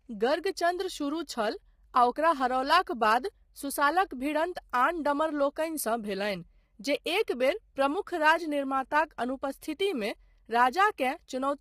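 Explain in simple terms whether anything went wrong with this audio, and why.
Throughout the clip the speech sounds rough and grainy, with a fizz between the tones of the voice and a dull, artificial top end. That is heavy low-delay AAC compression, likely the kind used for video calls. It cuts the sound into very short slices to keep delay down. Such short slices capture the voice's pitch poorly and waste data, so at low quality the gaps fill with noise and the highs get rebuilt crudely.

From 4.54 to 4.56 s, just after "ओकरा हरओलाक बाद सुसालक", a brief hiss arrives a split second before a sharp sound, which then lands softened and smeared. This is pre-echo. The compressor handles sound in blocks and spreads its noise evenly over each one. When a sudden loud moment sits late in a block, noise sized for that loud moment also spills into the quiet instant before it, for about 21 ms here.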